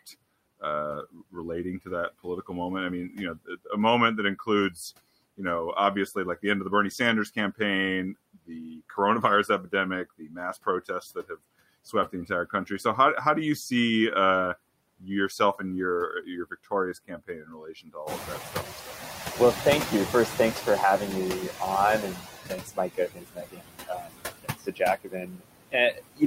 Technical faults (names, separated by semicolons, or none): noise suppressor artifacts; speech cut by the noise suppressor; noise suppressor catching up